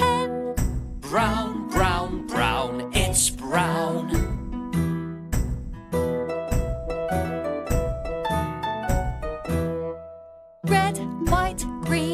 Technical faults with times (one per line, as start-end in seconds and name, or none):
none